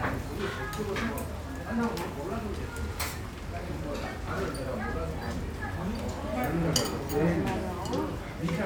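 A recording of sounds, with no technical fault audible anywhere in it. There is nothing to place at a particular time or trace to a cause.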